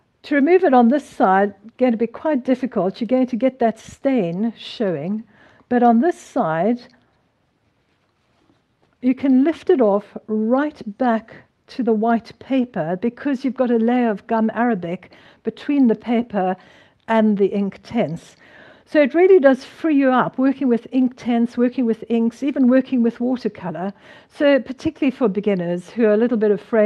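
No technical faults can be heard anywhere in the clip. The audio comes through a WebRTC call path that is working normally, with the highs rolling off at about 12 kHz, which fits an Opus codec running at around 32 kbps.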